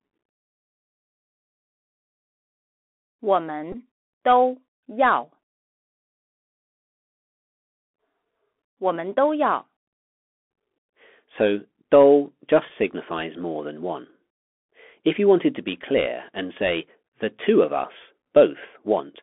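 A speech recording heard through a Bluetooth CVSD headset codec for its whole length. The band runs only from about 250 Hz to 3.4 kHz, and on a spectrogram everything above that is empty. The one-bit slope coder can't follow sharp rises, so loud bright moments smear and distort, s sounds come out scratchy, and a grainy hiss sits under the speech. That hiss appears as a speckled floor across the passband, and the damage fits a 64 kbps narrowband link. A Bluetooth headset packet repeated twice. The first is at 3.72 to 3.76 s, with about 15 ms of audio lost, which suggests four packets in a row. The second is at 12.69 to 12.71 s, with about 11 ms lost, roughly three packets. Each time the headset decoded the previous packet's bits again, so a short stretch recurs every 3.75 ms and makes a brief buzz near 267 Hz. On the waveform this shows as a small block of similar repeating cycles, and on a spectrogram as a short stack of evenly spaced harmonic lines.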